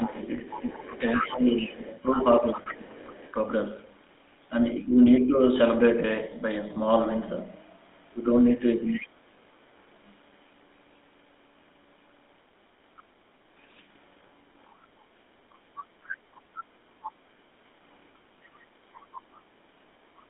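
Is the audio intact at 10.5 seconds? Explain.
No. At 10.5 s, as throughout the clip, the speech carries GSM full-rate codec damage: a vocal-tract model driven by sparse regular pulses gives a plainly buzzy, gravelly roughness, and the band is confined to about 200 Hz to 3.6 kHz, consistent with 13 kbps coding.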